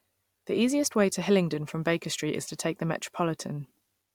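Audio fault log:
No fault is heard anywhere in this speech recording. Nothing in the audio calls for a log entry.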